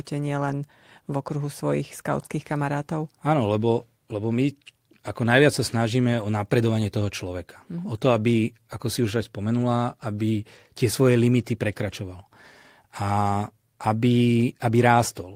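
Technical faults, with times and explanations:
0.45–0.59 s, 3.77–3.83 s, 6.19–6.25 s, 8.11 s and 9.57–9.63 s: lost packets rebuilt from error correction. Packets went missing, and the decoder filled each hole with the low-bitrate copy carried in the next packet. Nothing drops out, but each 20 to 80 ms patch sounds briefly rougher and noisier.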